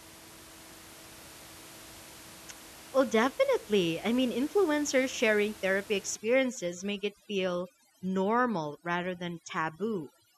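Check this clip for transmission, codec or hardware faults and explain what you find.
One fault appears: overdone noise removal, from 6.17 s to the end at 10.37 s, starting just after "mean influencers sharing therapy". Up to that point the room noise sits about 21 dB below the speech. After it, a noise reducer set far too strong drives individual frequency bands down or off whenever they come near its noise estimate, taking the quieter parts of the speech with them. The background drops to near silence flecked with twinkling specks. A low-bitrate codec also leaves swirly, metallic artefacts, but its coarseness stays roughly constant regardless of level. Here the damage concentrates in the quiet bands and pauses, and the background is stripped away rather than left in place.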